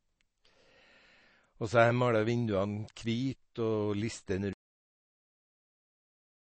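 Speech that sounds watery and swirly throughout, with nothing above 8.3 kHz, points to MP3 compression, likely at a low rate fitting about 32 kbps. At 4.53 s the sound stops mid-sound and drops straight to digital silence without decay, a cut-off end where the final buffers were never played.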